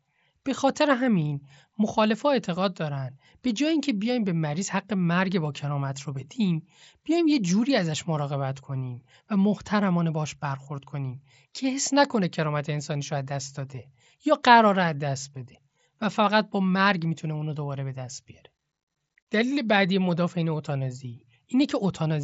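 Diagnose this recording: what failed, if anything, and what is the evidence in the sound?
Nothing failed in this recording; the speech comes through a Bluetooth mSBC headset codec working as intended, with no content above 7.7 kHz.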